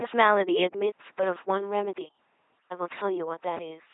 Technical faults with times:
0.00-3.94 LPC-10 vocoder

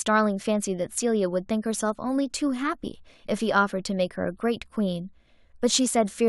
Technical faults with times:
none

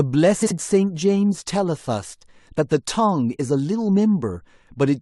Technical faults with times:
0.42-0.52 frames out of order

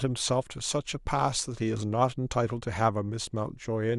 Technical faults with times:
none

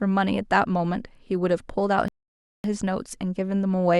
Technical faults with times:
2.08-2.64 playback stall

